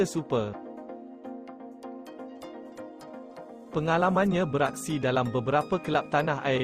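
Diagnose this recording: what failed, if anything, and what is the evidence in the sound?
From 2.07 s the sound turns rougher and watery, losing fine detail, and it stays degraded until about 5.37 s, with the poorest stretch lasting around 2.2 s before clarity returns. This is a call bitrate drop at the codec stage, triggered by the network: the bandwidth estimate fell, and the encoder was told to go from 32 kbps down to 18 kbps, so it coded everything more coarsely until the rate recovered.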